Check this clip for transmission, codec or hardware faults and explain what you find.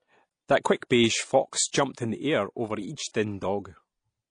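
The speech shows one codec fault, present for the whole clip. It is likely transcoding between lossy codecs. An earlier low-rate coder, consistent with AAC-LC at about 32 kbit/s, seems to have been re-encoded as MP3 at around 64 kbit/s. The MP3 stage spends bits reproducing the first coder's artefacts, then adds its own. Nothing sounds above 10.1 kHz, a cut-off kept from the chain. The speech sounds dull, with the two coders' different artefacts heard together.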